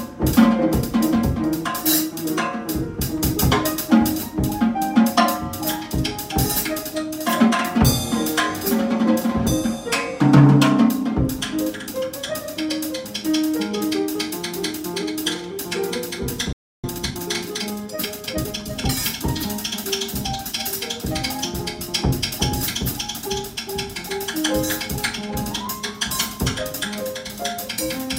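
At 16.53 s the sound stops dead mid-flow and stays silent until 16.84 s, a gap of about 310 ms. This is a playback stall. The player likely ran short of data, or its output thread was held up, and nothing reached the output until it recovered.

From 16.84 s to 18.90 s a time-compressed catch-up follows. The player trims its backlog by removing small slices and cross-fading the joins. The audio runs about 1.15 times fast at unchanged pitch, sounding hurried.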